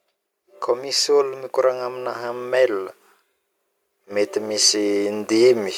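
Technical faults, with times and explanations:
0.8–2.93 s and 4.05–5.73 s, automatic gain rising: the gain control climbs slowly, by about 5 dB then about 4 dB, so speech and background swell together over seconds, unlike a fast compressor pump.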